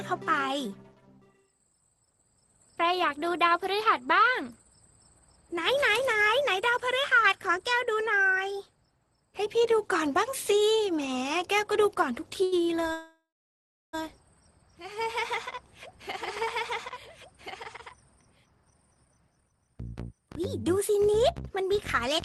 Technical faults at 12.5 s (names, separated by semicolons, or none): short stall from a late packet